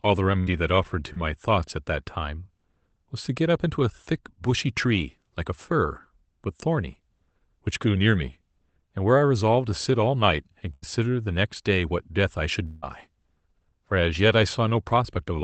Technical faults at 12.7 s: long network dropout

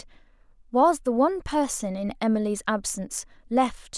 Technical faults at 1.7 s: none

